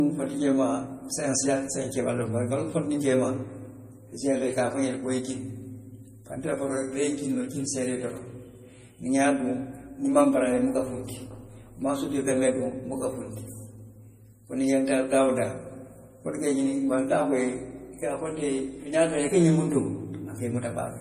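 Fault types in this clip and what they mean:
MP3 compression, throughout: nothing sounds above 15.1 kHz, and the speech has a plainly audible watery, swirly texture. The likely cause is an MP3 encoder short of bits, consistent with about 40 kbps, cutting the treble and toggling weak frequency lines between frames.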